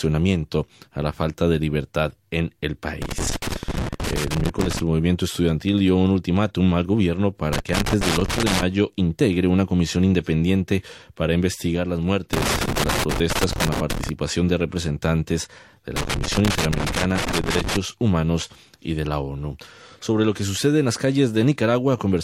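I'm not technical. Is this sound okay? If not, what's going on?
No, it has a problem. Four times there's an uneven burst of crackling and scratching: from 3.02 to 4.79 seconds, 7.53 to 8.62, 12.33 to 14.09, and 15.96 to 17.76. That's loose connector crackle. A worn or dirty plug or socket keeps losing and regaining contact, so the sound gets chopped into rough bits. Reseating or cleaning the connection usually fixes it.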